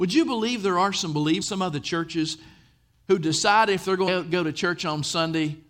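Compressed frames were skipped twice, so the decoder played nothing for whole 24 ms frames and jumped ahead. At 1.41 s, after "believe there are some", about a third of a second of speech vanishes, which fits roughly ten frames. At 4.07 s, after "who decide if they're", about a fifth of a second goes.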